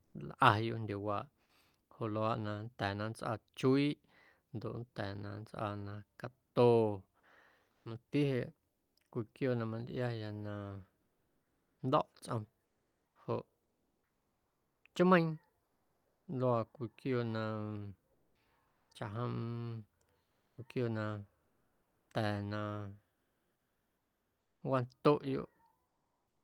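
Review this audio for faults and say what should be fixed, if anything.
The sender likely used discontinuous transmission (Opus DTX), stopping whenever no speech was detected. The receiver then filled the gaps with comfort noise in place of the background. The real ambience was replaced by a smoother synthetic noise for about 0.46 s within 6.47–8.95 s, about 3.1 s within 11.01–16.27 s, about 0.44 s within 18.13–18.89 s and about 3.0 s within 20.23–26.43 s. Turning DTX off at the encoder would keep the genuine background throughout.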